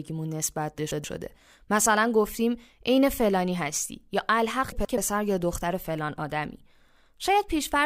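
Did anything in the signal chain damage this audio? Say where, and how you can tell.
Yes. From 0.78 to 1.04 s and again from 4.72 to 4.98 s, the speech breaks into a brief garbled flutter. These are frames out of order at the network or codec stage: two neighbouring 128 ms blocks were decoded swapped, with no time lost.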